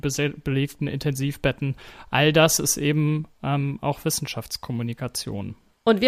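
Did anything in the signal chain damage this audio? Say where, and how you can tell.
Yes. A wireless microphone noise hit lands at 0.66 to 0.75 s, in the analogue radio link ahead of the converter. A brief burst of static swishes over the speech for about 90 ms. Reflections cancelled the FM carrier, so receiver noise rose through the audio.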